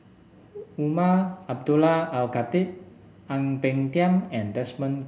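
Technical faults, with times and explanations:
No technical faults detected.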